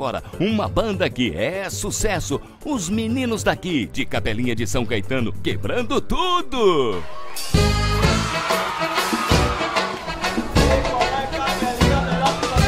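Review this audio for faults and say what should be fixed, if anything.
DC step at 3.94 s: the waveform's zero line jumps by about -26 dBFS, thumping once, holds, then drops back with a second thump at 7.63 s. Prevent it by high-pass filtering the input and avoiding converter recalibration or source switching mid-recording.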